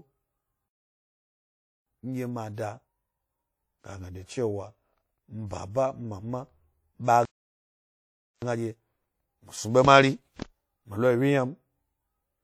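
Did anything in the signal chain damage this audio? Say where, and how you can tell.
Yes. At the codec stage, the speech carries plainly audible ringing and a washy hiss that rises and falls with the signal throughout. This is the signature of WMA compression, likely at a low rate near 48 kbps, where long transform blocks smear quantisation noise and zero weaker spectral lines.

Playback twice starved or blocked. The speech cuts out mid-flow from 0.68 to 1.87 s (about 1.18 s) and again from 7.25 to 8.42 s (about 1.17 s). That points to a likely playback stall, with output silent until the player recovered.

After each stall the player trimmed its backlog through time-compressed catch-up, removing small cross-faded pieces. The speech sounds hurried at unchanged pitch from 1.87 to 4.87 s at 1.1 times speed, then from 8.42 to 11.42 s at a quicker 1.25 times.

The same codec produced pre-echo at 2.54 to 2.58 s. 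A hiss spreads about 35 ms ahead of a sharp attack because quantisation noise sized for the loud onset filled the whole block, including the quiet moment before it, which also softens the attack.

A single sharp click at 10.97 s, a thin vertical line across the spectrum, indicates dropped samples, with something like one sample likely lost in the buffer or driver path. The waveform jumps forward, but too briefly to remove any sound.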